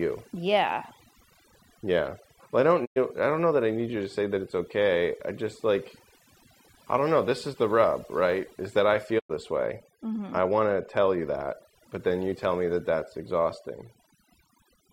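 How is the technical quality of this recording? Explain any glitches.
The recording is degraded by two problems: heavy-handed noise reduction across the whole clip and two brief signal dropouts.

Overdone noise removal runs throughout. The noise reduction was set so strong that it shuts off individual frequency bands near its noise estimate, taking the quiet parts of the speech with them. The voice sits over a near-silent background sprinkled with twinkling specks. On a spectrogram these appear as isolated bright dots scattered through empty black gaps.

A digital broadcast dropout occurs at 2.84 to 2.98 s, right after "I don't", and again at 9.18 to 9.32 s, between "that I" and "this way". Each time the receiver muted after losing good frames. The sound fades out over about 20 ms, leaving roughly 96 ms of missing audio, which fits a few lost frames. The waveform shows a short tapered ramp followed by a flat gap.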